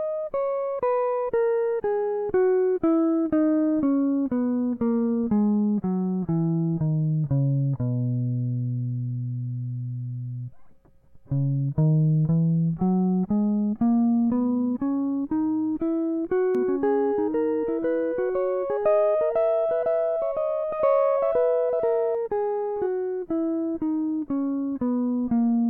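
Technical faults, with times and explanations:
16.55 to 22.15 s, doubled audio track: the music gains a dry copy running about two seconds behind, roughly 5 dB quieter, cutting in and out abruptly, likely from a slower second capture path or misaligned edit.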